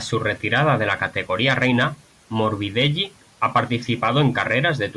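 No technical faults can be heard anywhere in this speech recording. Nothing in the sound points to a problem in the way it was captured or delivered.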